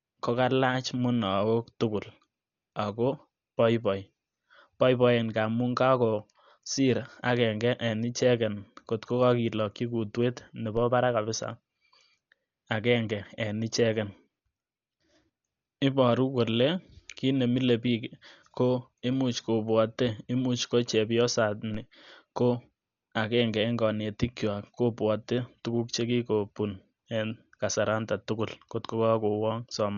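Throughout the clip the speech sounds dull and muffled, with nothing above 6.9 kHz and a rough, fluttering noise hanging around voiced tones. This heavy damage is likely Dolby Digital compression at a very low bitrate, which fits about 48 kbps, where the band is narrowed and starved frequency lines are filled with noise.

At 10.77 s and again at 21.74 s a low thump cuts in while the speech carries on unaffected. Each is a DC step: the waveform's zero line jumps suddenly, and the offset then drains away as a high-pass filter near 5 Hz pulls it back.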